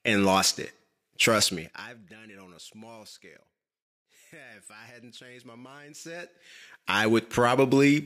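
From 1.42 to 2.02 s, a gain change of about 25 dB downward is applied in discrete jumps at around a hundred steps per second rather than as a continuous ramp, causing zipper noise. Each abrupt jump leaves a tiny discontinuity in the waveform, so the speech dips under a fast, gritty ticking that rides on it while the level falls, ending just before "done it on a".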